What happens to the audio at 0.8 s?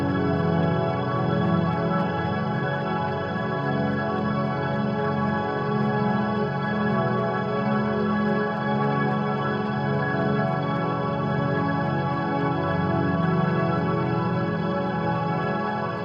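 Nothing goes wrong at 0.8 s; the audio is intact at that moment.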